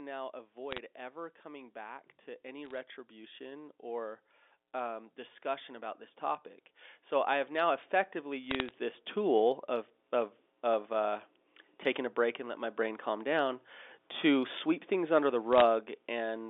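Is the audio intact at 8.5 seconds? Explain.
No. From 7.09 to 9.55 s there is an automatic gain rise. The gain control judged the input too quiet and raised its gain gradually, about 5 dB in all, so at 8.5 s the speech and the background noise are swelling together. Neither keeps a steady level, and the whole sound grows louder over that two-and-a-half-second stretch.

Overlapping that rise, from 8.44 to 8.71 s, there are bit errors on the digital phone line. On this G.711 mu-law path, a few bits in every thousand were flipped, and each flipped bit corrupts a single sample. When a high-order bit, or the sign bit of a loud sample, is hit, that sample jumps sharply, which produces a tick. Closely spaced ticks form a brief crackle laid over the speech, while the speech itself continues unchanged beneath it.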